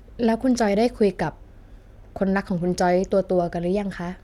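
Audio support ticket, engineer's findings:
Engineer's findings: no audio fault identified in the speech clip for this support ticket.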